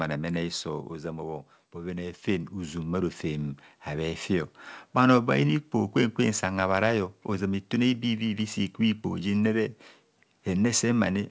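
From 0.05 to 0.89 s the speech shows automatic gain falling. The gain control judged the input too loud or its background too strong and eased its gain down by about 4 dB, so voice and background sink together. On the waveform the envelope tapers steadily, and the spectrogram dims evenly across all bands.

From 1.73 to 4.29 s comes automatic gain rising. The control treated the signal as too quiet and lifted its gain by about 8 dB over roughly two and a half seconds, making speech and background swell in step. The waveform envelope widens gradually, while the spectrogram brightens uniformly below its 8 kHz ceiling, which fits a wideband call path.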